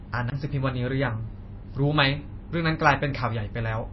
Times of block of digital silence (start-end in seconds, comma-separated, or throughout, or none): 0.30-0.32